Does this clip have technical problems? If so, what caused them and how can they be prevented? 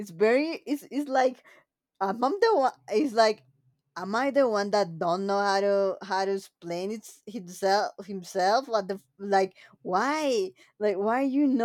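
No, no technical faults here.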